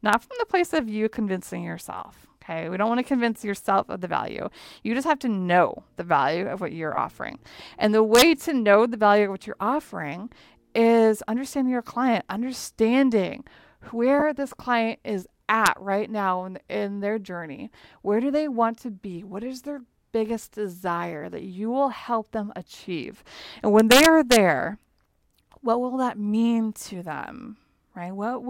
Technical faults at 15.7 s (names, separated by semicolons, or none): integer overflow